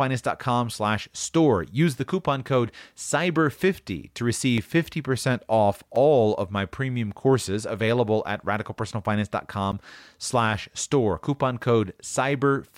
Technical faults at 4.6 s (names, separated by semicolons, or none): block of digital silence